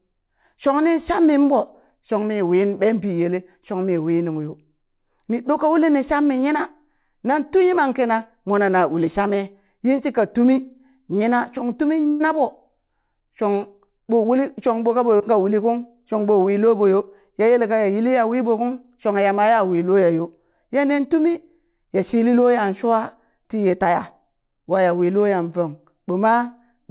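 At 12.08 to 12.23 s, right after "yina shong", there is a burst of packet loss. About 0.12 s of audio never arrived, and the receiver filled the whole stretch by extending the last sound and letting it fade, with no silent gap. What sets it apart from the shorter dropouts is its length. The concealment is long enough to be heard as a sustained, decaying tail rather than a blip, and when the real audio returns, the missing section has simply been skipped.

Two instances of short concealed packet loss follow. The first is at 15.17 to 15.23 s, just after "shong ɓo ka", and the second is at 21.32 to 21.38 s, just before "ya shili loya". Each replaces about 30 ms of lost audio with a continuation of the preceding sound and then blends back in. These are too brief to settle into a held tone, so they come across as a quick smear or wobble, and a short consonant can drop out.

All of this sits within a telephone-band sound with nothing above 4 kHz, which fits a G.711 mu-law call path at 64 kbps.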